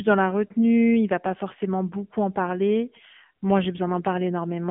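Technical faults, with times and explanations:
Throughout, AMR narrowband mobile codec: the speech comes through a phone-style band of roughly 150 Hz to 3.5 kHz, with nothing at all above 3.6 kHz, so sibilants go dull and the voice sounds boxed in. The damage is plainly audible: a buzzy, synthetic edge where the codec rebuilds the voice from a vocal-tract model and a few pulses per short subframe, which fits a low AMR-NB mode around 7.4 kbps.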